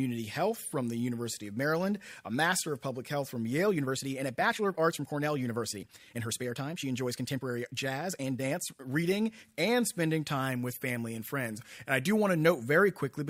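From 3.64 to 9.04 s there's a time-stretched section: the speech suddenly runs about 1.37 times faster with no pitch change, rushed, then settles before "and spending". Likely software squeezed it to fit a length by dropping short chunks.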